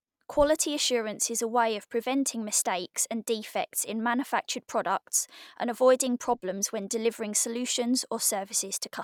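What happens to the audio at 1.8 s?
Nothing goes wrong at 1.8 s; the speech carries straight through that moment with no audible fault.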